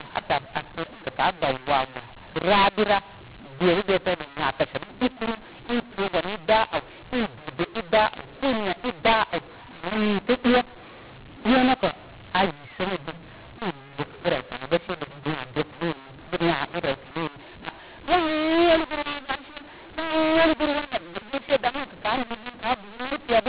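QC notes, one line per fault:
Throughout: mu-law and A-law mixed up. The A-law telephone samples are expanded with the mu-law curve, so levels land wrongly. The speech turns harsh and grainy, and the pauses fill with raised hiss. Unlike clipping, the distortion also affects quiet passages, not just loud ones.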